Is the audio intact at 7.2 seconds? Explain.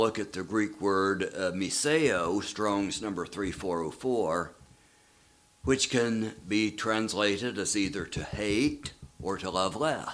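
Yes, the audio at 7.2 seconds is intact, with no dropout, glitch or other fault at that point.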